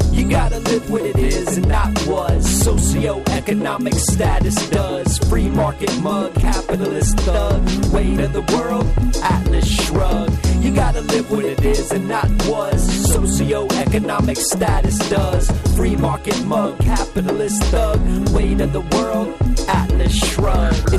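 Hard clipping runs through the whole clip, from start to finish. The signal arrives about 8 dB hotter than the stage carrying it can pass, so every peak that crosses the ceiling is cut off flat. Roughly one sample in twenty sits on that limit. Those squared-off tops add harmonics high in the spectrum, which is heard as distortion on the peaks.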